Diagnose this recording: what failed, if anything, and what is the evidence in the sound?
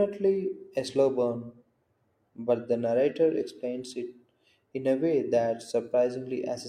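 Nothing failed in this recording, and the sound carries no evidence of any fault.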